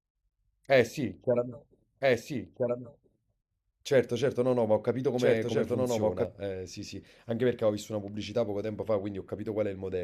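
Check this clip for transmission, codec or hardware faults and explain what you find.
One fault stands out. A doubled audio track runs from 2.01 to 6.25 s: the speech is mixed in twice, with a second full-band copy trailing by about one and a half seconds at roughly 5 dB lower. It has no reverberant tail or room colouring, and it cuts in and out abruptly at those two points. The likely cause is the signal being captured again through a slower path.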